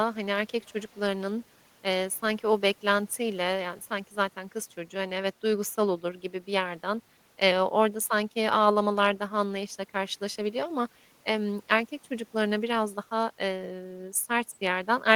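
From 0.61 to 1.0 s there is an echo leak: a very faint copy of the speech returns about 384 ms after the original, sitting around 35 dB below it. The likely cause is a far-end loudspeaker whose echo canceller let part of the microphone pickup through and sent it back. It sounds like a faint, delayed ghost of the speech. On a spectrogram it shows as weak harmonics shifted right by that delay; the waveform barely shows it.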